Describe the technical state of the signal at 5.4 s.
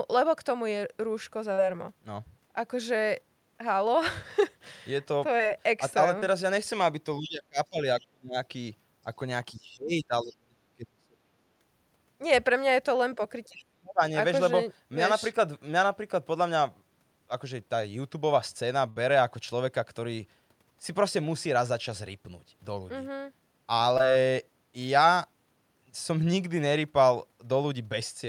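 At 5.4 s the signal shows a short concealed packet loss, running from 5.38 to 5.41 s. About 20 ms of the speech stream failed to arrive at the decoder in time, and the receiver patched roughly 17 ms of that gap by extending the preceding sound, carrying its pitch forward or substituting shaped noise, before cross-fading back into the real signal. The result is a brief smear or wobble in the speech at that instant.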